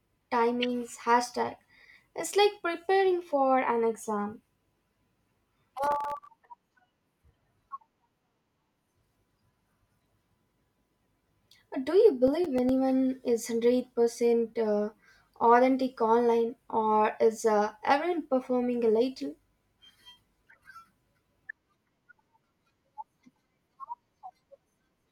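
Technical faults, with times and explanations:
5.84–6.29 s and 12.28–12.69 s: processor overload crackle. The processor fails to fill its very short buffers, around a millisecond and a half each, in time. Each missed deadline drops a sliver of silence into the speech with abrupt edges on both sides. About twenty such gaps cluster in the first burst and only a handful in the second, so the first sounds like dense, gritty tearing and the second like a lighter crackle. Each stops once the load eases.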